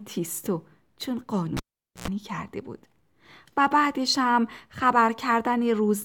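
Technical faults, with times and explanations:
1.57–2.08 s: cable pulled and plugged in. A pop cuts the speech to near silence for about 460 ms as the live lead leaves its socket. A roughly 96 ms burst of 60 Hz mains buzz comes within that gap while only the plug tip makes contact, then another pop as the signal returns.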